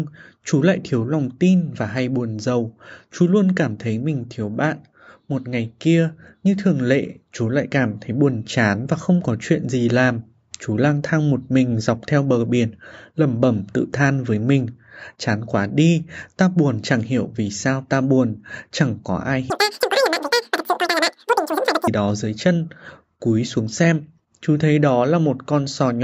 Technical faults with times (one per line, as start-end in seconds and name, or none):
19.50-21.88 wrong sample rate